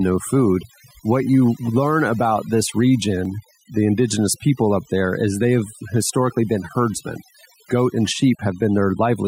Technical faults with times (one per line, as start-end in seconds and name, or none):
0.00-9.28 overdone noise removal
3.25 audio missing between chunks